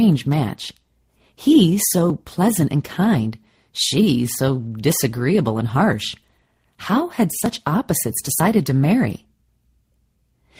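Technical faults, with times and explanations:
7.46 s and 8.40 s, dropped buffer (overrun): each is likely a capture block overwritten before the software read it, losing a slice of roughly 20 ms. The audio on either side is butted together with no gap, so each spot gives a small forward jump.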